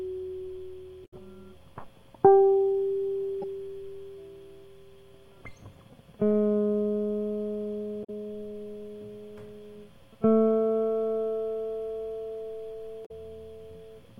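Damaged data in the compressed stream breaks the music at 1.02–1.13 s, 3.42–3.44 s, 8.01–8.10 s and 13.02–13.11 s. Corrupted bytes make the decoder misread frames and lose sync while it hunts for a valid header, producing brief chirping or squawking blips.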